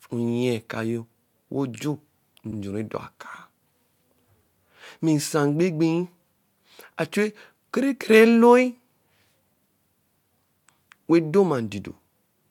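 At 2.50 s the speech stutters: a short stretch of about 70 ms, ending at 2.57 s, plays a second time, pointing to repeated frames. A run of compressed frames, which fits three frames of roughly 70 ms total, was sent twice, so the decoder rendered it again and the clip grows by about 70 ms. Unlike a dropout, nothing is lost. The same sliver is heard twice.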